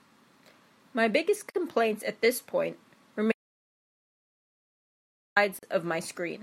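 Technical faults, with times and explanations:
1.50 s and 5.59 s, gap at a join of encoded pieces: brief silences of 46 ms and 40 ms with smeared edges, where separately encoded two-second pieces kept their encoder delay and padding.
3.32 to 5.36 s, audio dropout to silence: the speech cuts to silence with no room tone for 2.0 s, likely from the input being lost while silence was still written.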